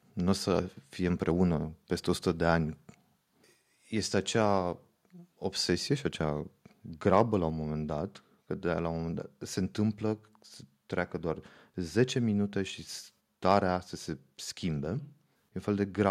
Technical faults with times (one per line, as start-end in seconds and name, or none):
7.13-7.21 microphone overload
7.50 microphone volume stepped down